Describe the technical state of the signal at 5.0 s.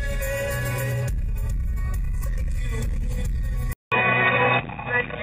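At 5.0 s the input has switched to a poorer device, from 3.73 s to the end, likely a headset profile. After a 0.19 s flat gap in the waveform, the level shifts and the sound turns dull and boxy over faint new background noise, with a spectrogram showing nothing above 3.8 kHz.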